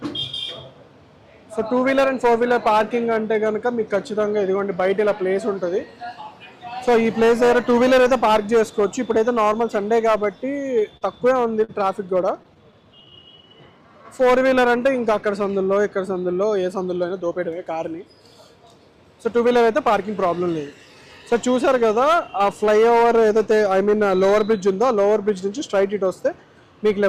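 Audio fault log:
10.97–11.03 s and 11.64–11.71 s, short stall from a late packet: the jitter buffer ran dry twice, so the last bit of sound gets held about 42 ms, then 44 ms, giving a brief hitch but nothing lost.
12.29–13.02 s, scattered short gaps: about seven tiny holes, roughly 10 ms at most, patched by carrying the sound on, so you get small ticks and smears.
12.70–14.40 s, jitter buffer slow-down: the receiver padded in 126 ms by repeating short cycles, so things run at 93% speed, same pitch but drawn out.
16.33–17.80 s, jitter buffer speed-up: the buffer was over-full, so roughly 150 ms got trimmed out in small slices, pushing it to 109% speed and sounding a bit rushed.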